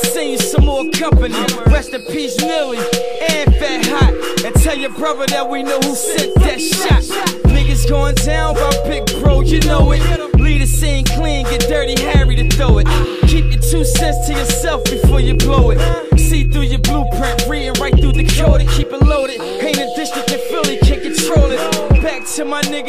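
No technical faults are audible.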